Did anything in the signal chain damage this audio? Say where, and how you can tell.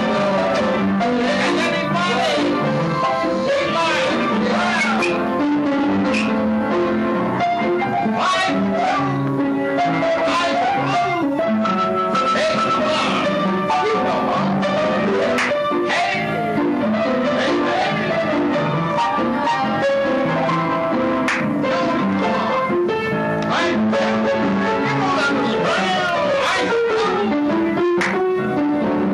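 No, nothing in the signal chain stood out as damaging this audio on listening, so there is no stage to point to.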